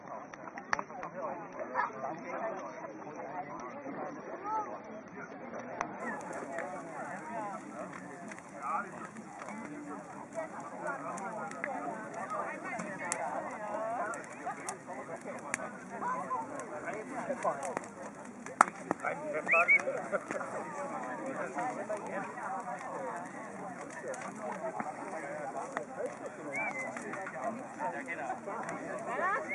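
For the first 6 s it's a low-bitrate start on an adaptive stream: dull, with stronger codec artefacts, nothing above 6.3 kHz, fitting roughly 24 kbit/s AAC, then it jumps cleanly to a better rendition.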